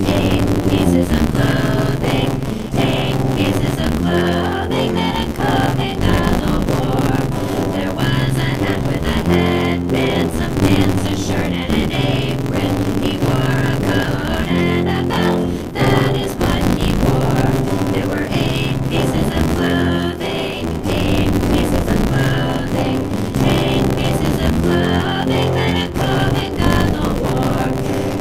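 Buffer tearing runs through the whole clip. The program filling the ring buffer and the hardware reading it have drifted out of step. Their positions cross inside every period. About two fifths of each buffer plays audio from roughly 20 ms earlier, with hard joins at both edges. The result is a steady robotic buzz near 86.1 Hz, which fits a 512-sample buffer. It rattles whenever sound is present and vanishes in silence.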